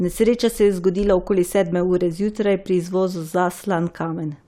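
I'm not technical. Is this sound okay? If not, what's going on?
Yes, this sound is okay, and nothing is going on with it that you need to worry about.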